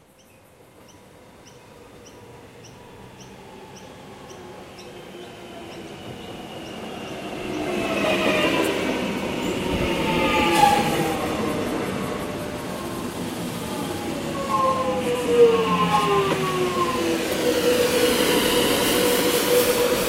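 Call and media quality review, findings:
Frames out of order at 2.87, 8.04, 11.15, 12.61, 15.04 and 18.18 s. Brief garbled flutter where two adjacent blocks play swapped: about 105 ms each, 26 ms at 12.61 s, 52 ms at 18.18 s. Waveform steps, thin vertical spectrogram lines at the joins. Likely upstream packet reordering; no time lost.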